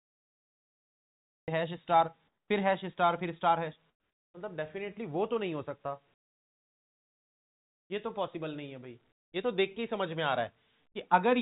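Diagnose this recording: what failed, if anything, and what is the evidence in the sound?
Cut-off start, at the recording or capture stage. Digital silence runs until 1.48 s. The sound then enters abruptly mid-event, with no natural attack.

Comfort noise in place of the background, in call processing. At 2.28 to 2.5 s, 3.9 to 4.34 s and 9.12 to 9.32 s, the background turns flat and featureless. It drops by about 4, 12 and 22 dB. The likely cause is discontinuous transmission with synthetic fill.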